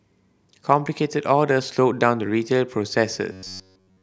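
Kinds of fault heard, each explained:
Robotic sound from repeated short buffers: from 3.32 s to the end, the speech becomes a rigid metallic buzz at 94.1 Hz that loosely follows the words, likely from a chunk of about 10.6 ms being looped throughout while fresh audio failed to arrive.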